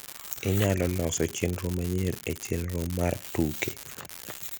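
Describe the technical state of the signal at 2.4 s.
At 2.4 s you're hearing an unreliable data bit, and it isn't local to that moment: it runs through the whole speech clip from start to finish. One line in the data path is marginal, so one bit in the sample word comes out wrong in a random share of samples. Every flipped bit throws in a spike of the same size, and together they make a steady crackle or fizz that carries on through the pauses as well.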